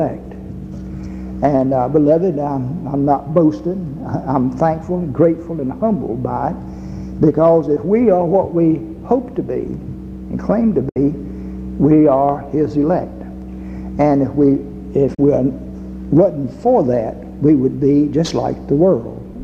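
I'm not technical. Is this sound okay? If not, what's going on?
No. At 10.89 s the sound briefly cuts out, fading to silence over a few thousandths of a second and staying gone for about 0.08 s before coming back. At 15.14 s there's a second, shorter gap of about 0.05 s. This is a digital broadcast dropout. The receiver briefly lost the signal or got damaged data, so it muted until clean data returned. Whatever played during those gaps is lost, not just quieter.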